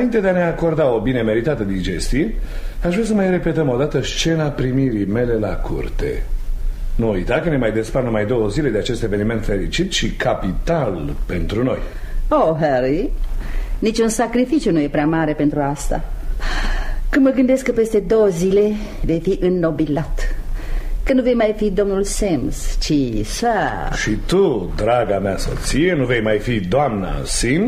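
No technical faults detected.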